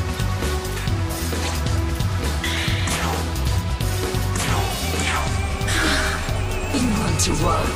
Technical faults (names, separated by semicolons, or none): DAB burbling